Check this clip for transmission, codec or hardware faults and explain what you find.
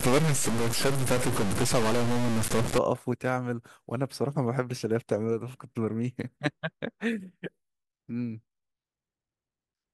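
One hardware fault is present. From 0.00 to 2.78 s the speech carries harsh, buzzy distortion, and pauses fill with hiss. This is likely a stuck bit, with one data bit held fixed so samples jump by a step of around -25 dBFS, flipping with the waveform's sign near silence.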